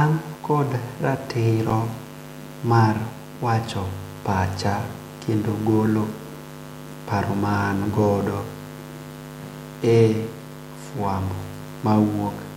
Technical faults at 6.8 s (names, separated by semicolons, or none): none